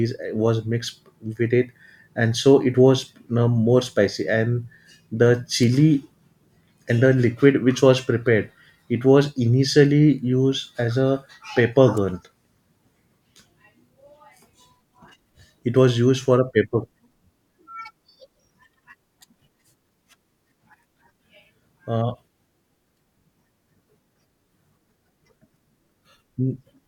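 At 5.63 s a sharp snap cuts across the speech, and at 11.97 s a second, quieter one follows as a tight burst of clicks. Both are electrical switching spikes, added on top of the speech rather than interrupting it. The first peaks fairly high, around -15 dBFS, the second somewhat lower. The likely cause is a nearby switch, motor or static discharge arcing briefly, with the audio line picking up the interference.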